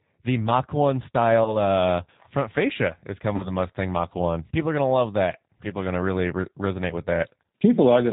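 Speech throughout sounds slightly rough and synthetic, with nothing above 4 kHz, the plainly audible mark of the G.729 codec. Its rate fits an 8 kbit/s G.729A stream, which rebuilds each 10 ms frame from a vocal tract filter, a pitch predictor and a few pulses. At 1.44–1.55 s, just before "uh front fascia is", and again at 3.36–3.51 s, just after it, the sound is stretched out and fades, and stays weak or distorted afterwards. This is VoIP packet loss concealed by the speech codec, about 20 ms and 40 ms missing respectively, consistent with one and two lost packets. The decoder extrapolates from its last pitch and filter, and later frames take time to recover.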